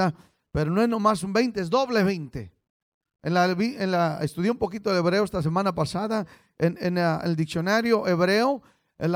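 Listening to the speech recording, nothing stood out as a technical problem at any point.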